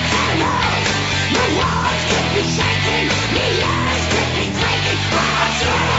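No technical faults can be heard anywhere in this audio. Its content stops at about 8 kHz, which fits the normal band limit of a call's microphone processing and WebRTC call path.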